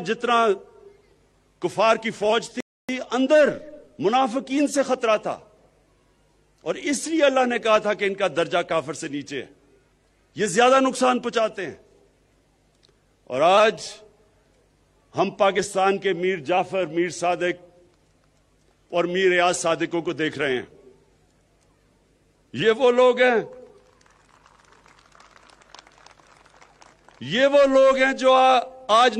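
The audio has a rebuffering stall from 2.60 s to 2.89 s: playback drops to silence for 283 ms, then resumes exactly where it stopped. The player exhausted its downloaded data and waited for more, so no audio is lost, but that gap is added.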